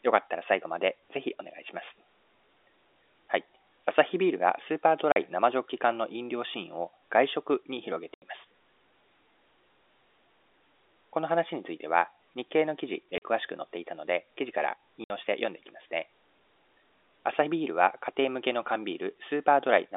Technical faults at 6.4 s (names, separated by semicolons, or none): none